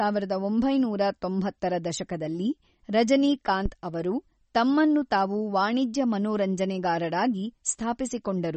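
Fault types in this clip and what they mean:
MP3 compression: The audio is likely MP3-encoded at a low bitrate, and the damage is plainly audible. Weak frequency lines drop in and out between frames, giving a watery, swirly texture to the speech, with chirpy sibilants and smeared onsets. Nothing remains above 8.4 kHz. On a spectrogram this shows as a hard ceiling at 8.4 kHz with patchy, flickering energy below it. The waveform itself shows little.
phantom power thump: A supply switching on a live input sent a voltage step through the coupling capacitors, heard as a deep thump at about 3.66 s lasting roughly 60 ms. It decays in about 13 ms. On the waveform it appears as a sudden low-frequency excursion that settles quickly. On a spectrogram it is a short burst of energy concentrated at the bottom of the frequency range.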